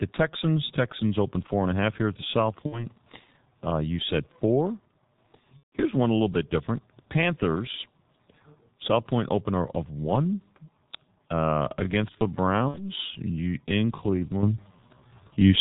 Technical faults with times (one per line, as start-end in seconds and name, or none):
0.00-15.60 G.723.1 codec
2.66-2.86 VoIP packet loss concealed by the speech codec
5.57-5.75 VoIP packet loss concealed by the speech codec
12.68-12.89 VoIP packet loss concealed by the speech codec
14.43 microphone volume stepped up